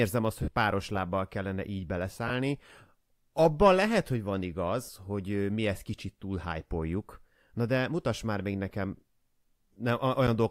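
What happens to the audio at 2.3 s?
Just after "páros lábbal kellene így", from 2.28 to 2.30 s, there are lost LE Audio frames. About 20 ms of the Bluetooth stream never reached the decoder, a gap that fits two 10 ms LC3 frames. To fill it, the LC3 decoder repeated the last good spectrum with randomised signs. The harmonic structure of the speech is replaced by a brief noisy smear, heard as a short, rough blur before normal decoding resumes.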